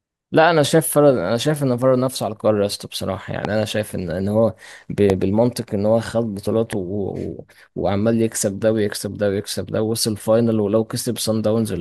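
Loud pops occur at 3.45–3.47 s, 5.10–5.12 s and 6.73–6.75 s, each a single sharp crack standing roughly 15 dB above the speech for the first two and about 10 dB for the third. The likely cause is a brief voltage spike from a switch, connector or static discharge, which the following circuitry shapes into a short thump. The speech continues underneath each pop.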